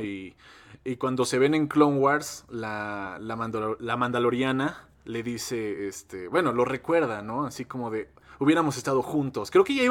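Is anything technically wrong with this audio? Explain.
No, nothing technically wrong shows up anywhere in this speech recording.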